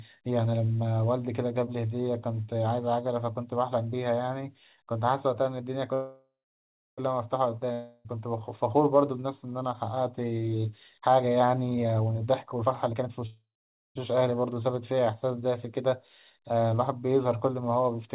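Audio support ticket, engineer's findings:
Call audio freeze, 5.94–7.00 s: sound stops, last fragment carried on as a fading buzz, then about 0.67 s of silence before resuming where it left off. Nothing lost; playout now about 1.04 s late. Likely jitter buffer underrun after delayed packets.

Call audio freeze, 13.26–13.97 s: same signature, fading tail then about 0.51 s of silence, resumes with no content missing. Adds about 0.69 s of delay.

Long network dropout, 7.72–8.07 s: about 0.32 s of audio never played. Fading buzz fills the gap without settling into silence; sound returns further on with a jump where content is missing. Likely packet loss in transit. Concealment and codec in the narrowband G.711 A-law path, nothing above 4 kHz.

Jitter buffer speed-up, 11.68–13.25 s: speech rushed, running at 146% rate with pitch unchanged. Receiver cutting short pitch-period segments repeatedly to drain a backlog, roughly 0.7 s of audio trimmed. 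Occurs just ahead of the 13.26 s freeze.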